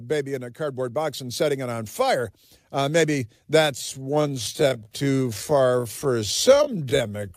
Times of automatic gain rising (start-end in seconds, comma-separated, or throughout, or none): 0.56-3.02